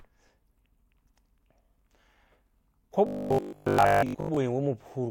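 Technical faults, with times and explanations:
3.07 to 4.37 s, robotic sound from repeated short buffers: the speech becomes a rigid, metallic 50 Hz buzz, likely from a 20 ms chunk being replayed for most of the stretch while real audio is skipped. A spectrogram shows evenly spaced 50 Hz harmonic stripes, and the waveform shows identical 20 ms cycles.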